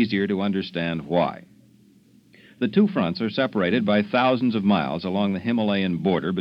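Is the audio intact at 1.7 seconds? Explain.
Yes, the audio is intact at 1.7 s, with no dropout, click, distortion or other fault at that moment.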